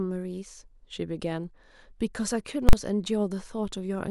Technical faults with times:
2.69-2.73 invalid numbers at full scale

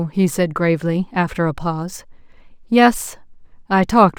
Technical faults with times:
0.00-4.19 imaging from linear upsampling

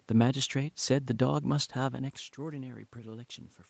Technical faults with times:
1.90-3.69 automatic gain rising

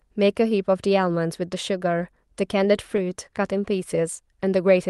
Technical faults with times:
2.51-3.13 scattered short gaps

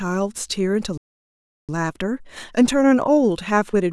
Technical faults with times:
0.97-1.69 playback stall
1.69-3.92 time-compressed catch-up

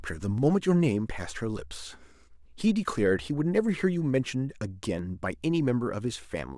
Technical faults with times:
0.38 dropped samples
2.98 dropped samples
4.99 dropped samples

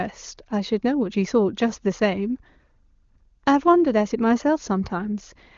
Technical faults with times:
none

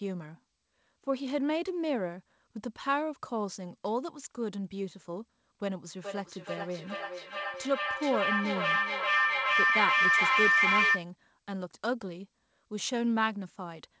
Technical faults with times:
5.84-11.12 feedback howl

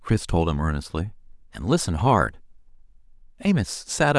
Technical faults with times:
none

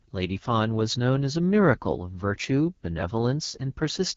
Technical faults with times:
0.00-4.16 AMR wideband (HD Voice) codec

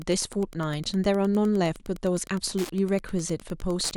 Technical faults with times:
0.00-3.97 Wi-Fi interference

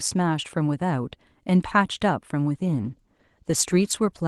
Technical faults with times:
2.63-4.27 call bitrate drop

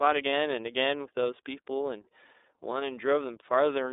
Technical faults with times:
0.00-3.92 iLBC codec
0.30-0.33 lost iLBC frames

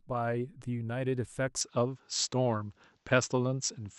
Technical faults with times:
1.61-3.99 input switched to a poorer device

